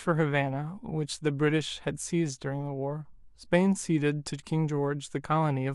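Speech carries a resampler restarted on every block from 0.0 to 4.0 s: regular ticks at 10 Hz under the signal, pointing to independently converted 100 ms blocks, apparently 48 kHz to 44.1 kHz.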